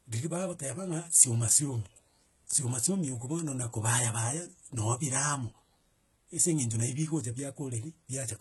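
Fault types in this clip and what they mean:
HE-AAC compression: the speech's treble is likely rebuilt by spectral band replication, copied upward from lower bands, which fits a very low bitrate near 16 kbps. Sibilants sound gritty and metallic. A spectrogram shows blocky, repeated upper-band patterns and nothing above 11.8 kHz.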